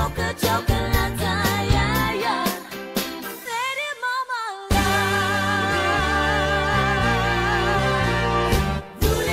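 At 3.45 s the audio does a skip ahead. About a second of sound is missing. Playback jumps forward and the two sides are joined almost directly, with no gap. Late audio was already waiting, and the earlier stretch was discarded rather than played.

From 4.05 to 4.67 s a jitter buffer speed-up follows. The receiver trimmed short pitch-period pieces repeatedly to shrink excess buffered delay. Around 50 ms were removed in total. The sound runs about 7% fast at unchanged pitch and feels slightly hurried.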